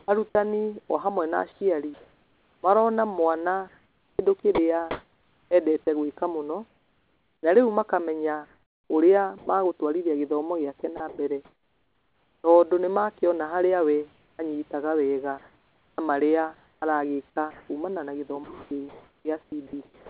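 Choppy speech from 0 to 9.47 s, 10.97 to 12.44 s and 14.12 to 20.1 s: sound chopped by the voice detector, likely swapping quieter moments for comfort noise.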